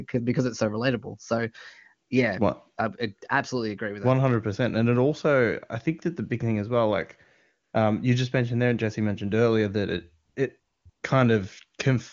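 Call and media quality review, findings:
Background drops to a flat, smooth hiss in short gaps: 7.63–7.73 s (after "thing as well like", before "um you just mentioned"), 10.25–10.35 s, 10.59–10.85 s and 10.89–11.03 s (both after "earlier that it it"). AMR comfort noise: sender flagged silence, stopped sending speech frames, receiver synthesised noise.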